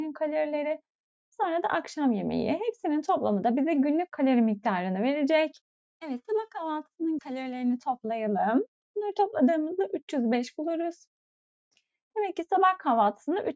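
No technical faults can be heard: the sound has passed through a call's microphone processing, whose high-pass filter trims the lowest bass and whose band stops at 8 kHz, and both are normal for that path.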